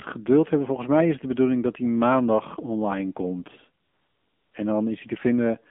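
Throughout, the speech sounds thin, boxed-in and somewhat buzzy, confined to roughly 200 Hz to 3.4 kHz with nothing above. This is the AMR narrowband mobile codec: a pulse-driven vocal-tract model at 8 kHz sampling, and the plainly audible synthetic edge suggests a low mode around 7.4 kbps.

At 2.19 s a single sharp tick cuts through, broadband and unrelated to the speech around it. That is a bit error spike: one flipped bit in a single sample makes the value jump by a power of two and return.

From 3.84 to 4.54 s the real background gives way to a smooth, steady hiss that switches in and then out again. This is AMR comfort noise: for 700 ms no speech frames arrived, and the receiver filled the gap with synthetic noise shaped from a coarse level and spectrum estimate.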